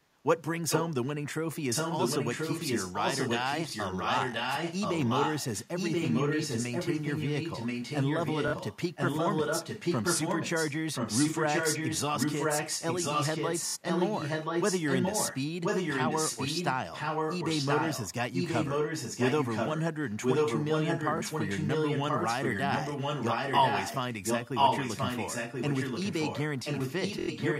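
A likely echo leak starts at 0.69 s and keeps returning, at 1.69–15.42, 15.63–16.75, 16.92–18.14, 18.33–19.82, 20.06–26.42 and 26.64 s to the end. The speech comes back about a second late at roughly the same level, as if a speakerphone's echo canceller missed it. A Bluetooth stutter at 3.69, 8.48, 13.68, 21.18 and 27.19 s replays a short slice for about 23 to 93 ms, giving a single repeat or a quick buzzy run of repeats before the sound jumps ahead.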